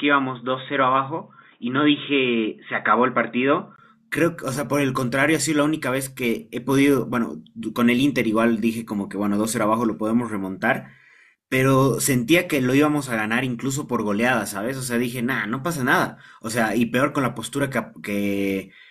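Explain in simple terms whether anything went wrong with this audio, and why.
Input switched to a poorer device, from the very start until about 3.78 s. For those first seconds the speech sounds dull and muffled, as if heard through a cheap headset, with a faint background hiss of its own. Nothing above about 3.8 kHz comes through. At 3.78 s there is a tiny gap, then the sound opens up and clears, at much the same loudness. That sudden change in tone is most likely the recording switching from a lower-quality microphone to a better one.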